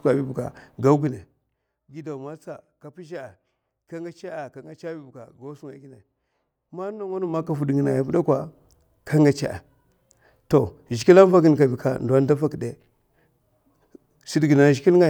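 From 7.08 to 7.55 s the speech carries zipper noise: the level swings by about 20 dB in 1 dB jumps, around 50 a second, with no smoothing between them, so each jump leaves a small click. The result is a rapid ticking or zipping riding on the speech while the level moves. Here the stepped gain itself is audible.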